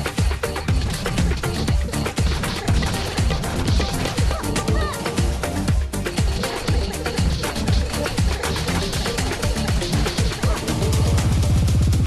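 No technical faults can be heard anywhere in the clip.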